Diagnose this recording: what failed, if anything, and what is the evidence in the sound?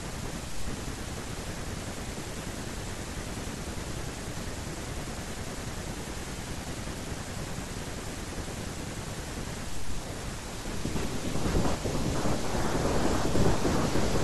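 Nothing failed in this recording, and the sound offers no evidence of a fault at any stage.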